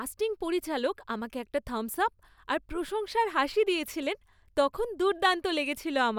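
Listening to this speech recording, nothing stood out as a technical problem at any point.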